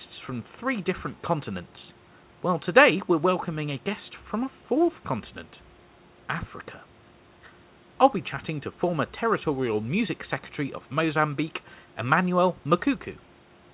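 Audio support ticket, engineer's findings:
No faults found.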